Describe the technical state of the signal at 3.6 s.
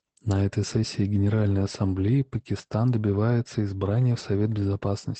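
Opus voice compression is present at 3.6 s, as across the whole clip. The linear-prediction coder rebuilds the speech from a coarsely coded excitation and stops near 8.5 kHz, which fits a wideband setting around 12 kbps, leaving it muffled, hoarse and slightly robotic.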